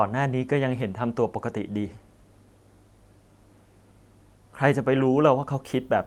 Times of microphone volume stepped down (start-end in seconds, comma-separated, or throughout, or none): none